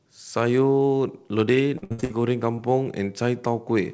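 From 1.78 to 2.12 s there is repeated packet loss, which gives the sound a choppy, robotic quality. Five holes follow one another in quick succession, the longest about 62 ms. About 240 ms of audio is missing, and roughly 70% of that stretch is concealed by extending the preceding sound. On a spectrogram the harmonics turn into flat, smeared bands. In the waveform, identical cycles repeat across each patched hole.

From 2.56 to 2.60 s there is a short concealed packet loss. About 20 ms never arrived in time, and the receiver filled the gap by extending the last sound before fading back into the real signal, so a brief smear or wobble is heard. On a spectrogram it appears as a narrow, blurred sliver. In the waveform it appears as a short, overly regular patch.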